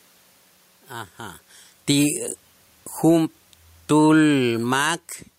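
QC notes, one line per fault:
3.76–4.92 s, automatic gain falling: the gain control judged the input too loud and pulled its gain down by about 10 dB, so the speech and the room noise sink together.
4.83–5.21 s, automatic gain rising: after the input dropped by about 17 dB, the gain control climbed back about 4 dB, so the speech and the background swell together.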